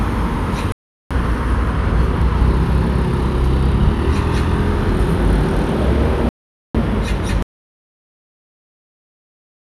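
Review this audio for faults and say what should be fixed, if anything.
Digital broadcast dropout at 0.72–1.11 s and 6.29–6.75 s: the receiver muted for about 0.38 s and 0.46 s, consistent with runs of failed frames, then resumed.

Audio dropout to silence from 7.42 s to the end: the sound cuts to silence with no room tone, likely from lost input while recording continued.

To prevent these, improve reception margin or record from a wired source, and monitor input connections and mute states throughout capture.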